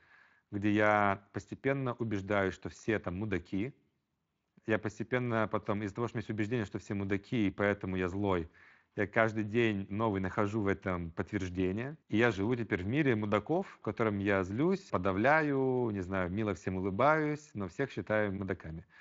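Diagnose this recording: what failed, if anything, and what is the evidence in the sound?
Nothing failed; no fault is audible in this speech.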